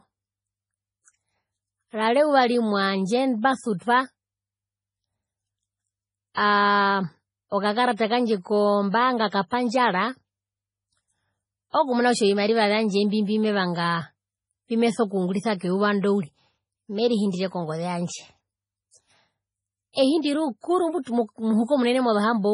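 Speech, cut off sharply above 10.5 kHz throughout. Unlike a plain low-pass filter, low-bitrate MP3 artefacts remain. This is likely low-bitrate audio saved at a high bitrate, which fits 24 kbit/s MP3 re-encoded at 218 kbit/s.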